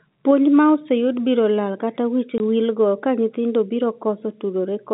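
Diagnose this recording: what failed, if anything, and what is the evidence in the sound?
The failure is in the network stage: packet loss filled with silence. Right after "biro lal kata wich", the speech drops out from 2.38 to 2.40 s, a 20 ms hole with abrupt edges, consistent with a single lost 20 ms packet replaced by silence over the G.711 telephone band.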